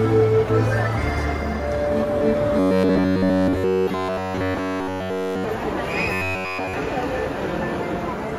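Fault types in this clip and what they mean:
Robotic sound from repeated short buffers: from 2.59 to 5.44 s and 6.13 to 6.74 s the sound becomes a metallic 93.8 Hz buzz, likely a 10.7 ms chunk replayed while new audio is skipped. Spectrograms show evenly spaced harmonic stripes; the waveform shows one repeating cycle.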